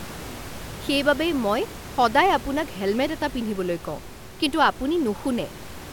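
No technical faults occur in the speech, and the room noise heard behind it sits about 15 dB below the voice.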